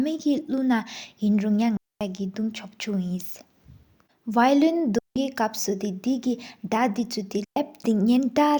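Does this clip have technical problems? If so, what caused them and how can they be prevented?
Yes. Three digital wireless dropouts cut the speech: 1.77 to 2.01 s (about 240 ms), 4.98 to 5.16 s (about 175 ms) and 7.44 to 7.56 s (about 120 ms). Each time the receiver lost too much data and muted with a very fast fade, leaving clean near-silent holes with no noise burst on either side. On a waveform they show as flat gaps; a spectrogram shows empty vertical bands across all frequencies. Keeping a clear line of sight and shortening the transmitter-to-receiver distance prevents this.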